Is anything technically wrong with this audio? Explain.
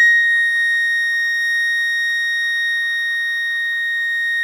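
No, nothing is technically wrong with this music clip. No technical fault can be heard anywhere in it.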